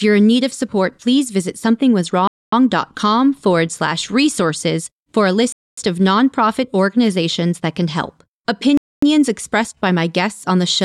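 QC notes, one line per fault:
2.27–2.52 s, 5.52–5.77 s and 8.77–9.02 s: gap between chunks. The speech is cut by three 250 ms silences, one every 3.25 s, after each 3 s chunk. Two fall between "slash resources for a" and "of nonprofit organizations that", and between "organizations that can help" and "expressed by my guests". No speech is lost; playback stops and restarts at each join. The waveform drops to a flat line with hard edges, and the spectrogram shows blank vertical bands.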